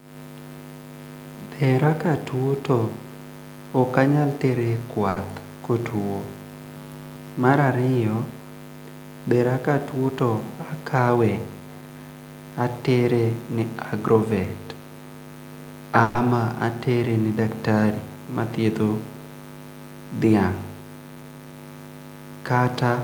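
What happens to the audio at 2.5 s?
Nothing goes wrong at 2.5 s; the speech carries on intact through that moment with no dropout, glitch or distortion.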